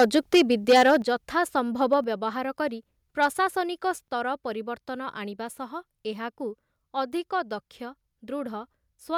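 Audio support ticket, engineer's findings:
Microphone overload, 0.00–0.96 s, 1.92–1.94 s, 3.22–3.26 s. Harsh crackle on the loudest syllables, worst in the opening second, where peaks push about 7 dB past full scale and a noticeable share of samples are flattened. Later bursts are brief, about 1 dB and 2 dB over. Likely cause: mic input gain set too high, so the converter squares off waveform tops and adds gritty distortion.

Microphone volume stepped down, 1.02 s, 2.04 s, 4.08 s. Abrupt level drops of about 7 dB, 4 dB and 3 dB, with voice and background falling together. Each of the first two follows an overload burst shortly after. Likely cause: call software's automatic gain control detecting clipping and cutting device input volume in single steps, giving audible jumps instead of a smooth fade.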